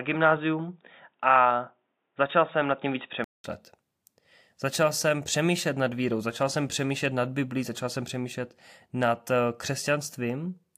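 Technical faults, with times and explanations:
0.0–3.44 s, input switched to a poorer device: speech is dull, with nothing above 3.8 kHz and faint added background noise, then clears after a 200 ms gap, likely a microphone change.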